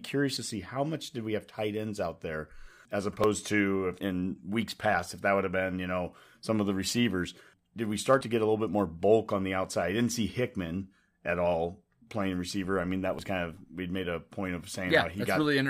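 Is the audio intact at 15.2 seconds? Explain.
Yes, at 15.2 seconds the speech plays through intact, with no audible fault at that moment.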